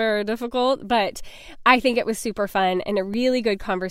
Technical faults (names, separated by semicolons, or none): block of digital silence